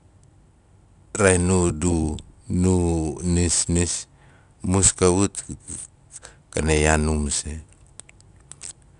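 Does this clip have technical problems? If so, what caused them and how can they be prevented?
Yes, there's plainly audible 4-bit ADPCM compression damage running through the whole speech clip. Each sample is stored as a coarse 4-bit step from a predicted value, so the rounding error becomes a grainy hiss that rises and falls with the speech level. The top end is also dull, with nothing above 10.6 kHz, which points to a sample rate of around 22 kHz. To prevent it, record and deliver in PCM or a modern codec at a full sample rate instead of 4-bit ADPCM.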